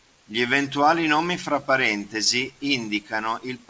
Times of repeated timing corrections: 0.16-3.64

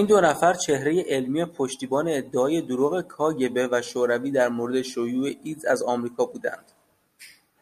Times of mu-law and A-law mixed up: none

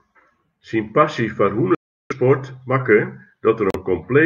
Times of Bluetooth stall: 1.75-2.12, 3.70-3.76

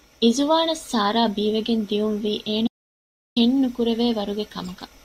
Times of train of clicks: none

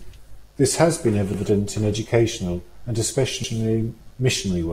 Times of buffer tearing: none

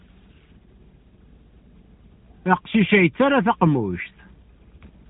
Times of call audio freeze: none

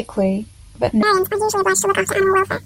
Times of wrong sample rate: 1.03-2.65

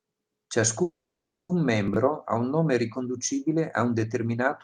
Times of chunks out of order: 1.88-1.96

